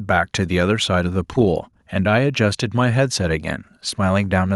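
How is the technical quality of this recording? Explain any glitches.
No glitches to report: the speech holds steady throughout, with nothing audible that needs flagging.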